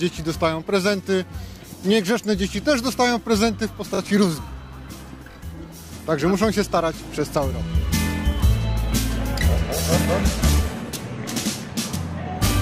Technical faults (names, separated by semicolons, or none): repeated buffer